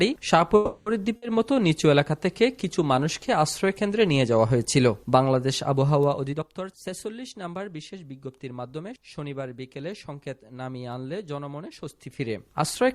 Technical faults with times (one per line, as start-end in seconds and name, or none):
0.55-0.89 call audio freeze
1.16-1.25 burst of packet loss
6.32-9.31 jitter buffer speed-up